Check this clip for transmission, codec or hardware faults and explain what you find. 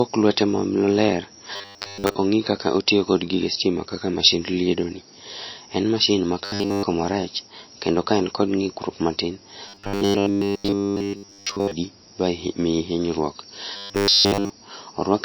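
Two problems show up in this speech clip: a low-bitrate codec sound running the whole way through, and four bursts of robotic buzzing.

The whole clip has plainly audible MP3 compression damage, likely from encoding at a very low bitrate, somewhere around 26 kbps. The speech sounds watery, with swirly artefacts where weak frequency detail flickers in and out between frames.

The robotic sound from repeated short buffers hits four times: 1.56 to 2.15 s, 6.45 to 6.83 s (right after "mashin ma" and just before "marach kendo ka en"), 9.69 to 11.72 s (ending just before "ba miyi hinyruok"), and 13.77 to 14.50 s (just after "ba miyi hinyruok"). The buzz sits at 100 Hz, which points to the playback likely looping a 10 ms chunk whenever fresh audio didn't arrive in time. In the first burst most of the audio is replaced, and in the later three all of it is. You get a rigid metallic drone that only loosely tracks the talking.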